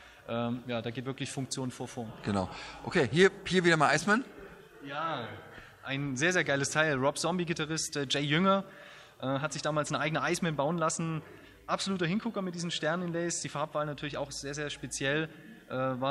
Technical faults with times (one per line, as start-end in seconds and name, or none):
none